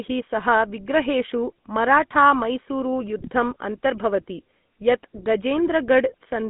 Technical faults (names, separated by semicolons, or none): GSM full-rate codec; GSM bit errors